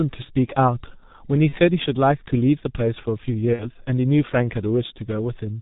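Throughout, the G.723.1 codec muffles the speech: nothing above 4 kHz, hoarse texture, smeared consonants. Heavy damage fits a bitrate near 6.3 kbit/s. At 1.49 to 1.55 s and 3.53 to 3.70 s, VoIP packet loss concealed by the speech codec stretches the speech into a fading buzzy tone or coloured noise. About 30 ms, then 60 ms, went missing, and the sound stays weak briefly afterwards.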